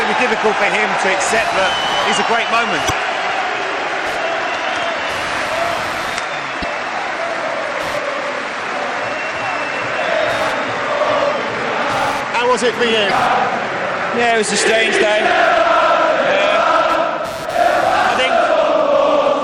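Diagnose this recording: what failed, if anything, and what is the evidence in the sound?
In the analogue wiring, the audio shares a ground with the computer, so processor and graphics load currents leak into it. The result is computer activity noise: a buzzy, chirping pulse train at around 150 Hz, roughly 25 dB below the sound, rising and falling with machine activity rather than with the audio.

At the codec stage, the whole clip carries plainly audible MP3 compression artefacts, likely from encoding at a low bitrate consistent with about 64 kbps. Weak detail swirls in and out between frames with a watery, metallic edge, and attacks smear.

In storage or transmission, stretches of the compressed stream were corrupted, so the decoder misread frames and resynchronised on the next header. This damaged data in the compressed stream produces short chirps or blips at 2.87 to 2.91 s, 6.62 to 6.64 s and 13.07 to 13.11 s.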